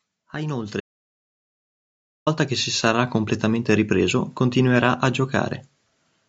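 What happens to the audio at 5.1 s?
Nothing goes wrong at 5.1 s; the speech there continues intact, carried through the normal call microphone processing with its usual bass roll-off and no content above 8 kHz.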